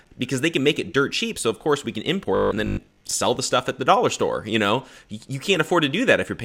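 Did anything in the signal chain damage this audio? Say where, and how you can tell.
Yes, robotic sound from repeated short buffers at the driver/buffer stage, 2.35 to 3.13 s after "of course we can". A rigid 50 Hz buzz, likely from about half the audio being replaced by repeated 20 ms chunks.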